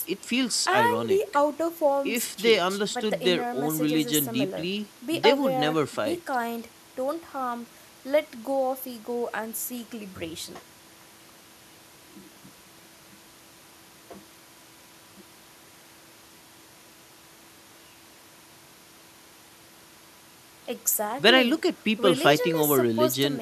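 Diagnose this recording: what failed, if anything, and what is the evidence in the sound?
Nothing in the signal chain has failed: the speech holds steady with no audible defect from any stage between capture and playback.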